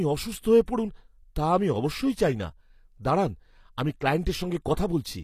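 From start to finish the treble sounds synthetic, with s sounds turning gritty and lispy and nothing above 15 kHz. This is likely HE-AAC compression at a low rate, fitting about 24 kbps, where the upper spectrum is rebuilt by copying lower bands upward, so harmonics no longer line up.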